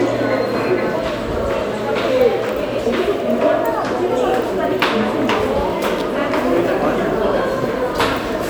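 A recording of sounds, marked by a sharp snap at 2.49 s and a brief cluster of clicks from 5.98 to 6.01 s, likely an electrical switching spike from a nearby switch or motor arcing into the audio line.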